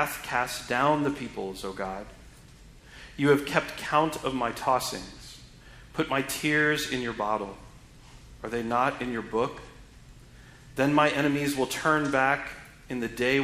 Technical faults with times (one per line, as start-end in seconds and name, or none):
11.23 dropped samples